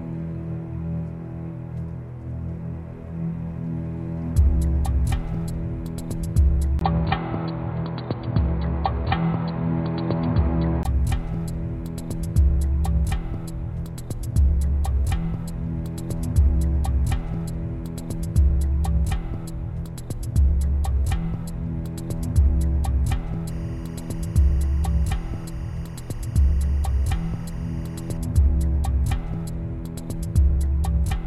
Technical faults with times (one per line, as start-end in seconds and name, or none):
6.79-10.85 input switched to a poorer device
23.48-28.17 timecode bleed